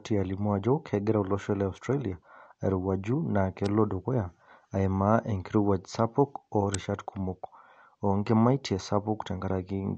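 Throughout, the speech sounds dull and smeared, with a fizzy, warbling edge on sibilants and nothing above 8.7 kHz. This is likely AAC compression at a low bitrate, around 32 kbps. At 3.66 s, just after "airowuaju naa", and again at 6.74 s, after "enkirowuaj sapuk", a sharp snap cuts through, likely an electrical switching spike picked up by the line.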